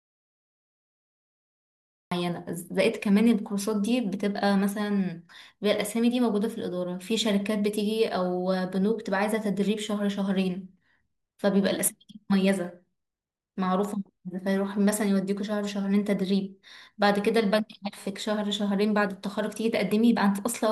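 Right from the first instant the speech clip is already in an audio dropout to silence, and it stays that way until about 2.12 s. There's no room tone at all in that stretch, just silence, so the recording was running while nothing reached it. The likely cause is a lost input, a disconnected device, a failed link or a stray mute. When sound returns it comes in mid-flow, and whatever came before it is simply gone.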